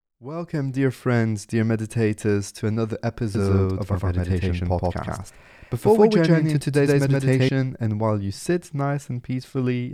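From 3.35 to 7.49 s the speech is a doubled audio track: an equally loud copy trails by roughly 150 ms, likely from a second, slower capture path. Unlike an echo, it never decays and switches on and off abruptly.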